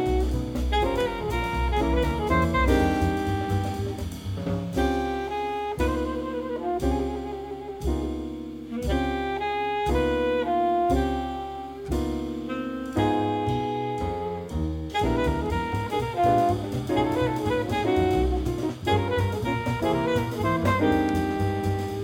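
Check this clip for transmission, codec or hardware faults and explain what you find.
No transmission, codec or hardware faults can be heard anywhere in the clip. There is nothing here that needs explaining.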